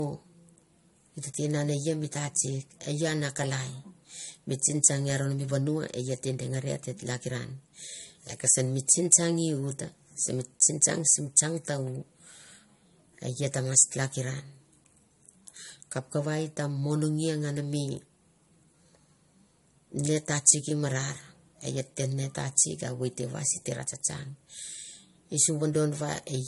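From start to finish the speech has nothing above 11.2 kHz, and two different sets of compression artefacts are heard layered together. That points to transcoding between lossy codecs, likely MP3 re-encoded as AAC-LC, both near 48 kbit/s, with the second encoder spending bits on the first one's damage.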